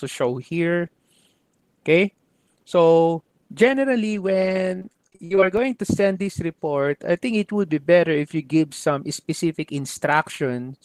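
From 4.79 to 5.43 s the sound turns choppy and robotic. This is repeated packet loss: rapid dropouts, up to 55 ms each, patched by repeating preceding audio.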